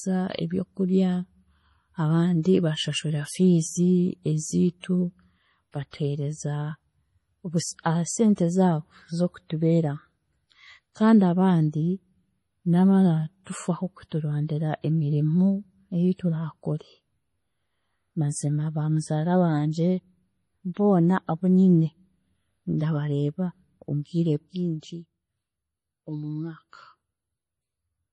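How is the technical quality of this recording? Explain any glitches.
The recording has heavy compression damage throughout and one stretch of zipper noise near the end.

MP3 compression, throughout: swirly, watery artefacts and nothing above 11.5 kHz, likely from an MP3 encoder starved of bits at a rate around 32 kbps.

Zipper noise, 24.29 to 25.10 s: the level drops about 10 dB in unsmoothed steps, roughly 40 per second, each clicking into an audible zipping texture.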